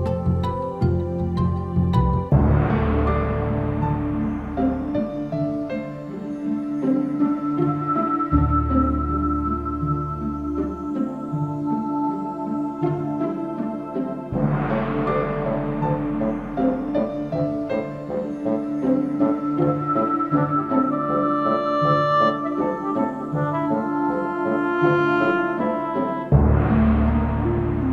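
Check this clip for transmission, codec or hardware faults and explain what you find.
One hardware fault runs through the whole clip: video or display buzz. A screen or video cable couples its 60 Hz field-rate buzz, topped with hash, into the audio. It sits faint, well below the sound, and is harsher than smooth mains hum.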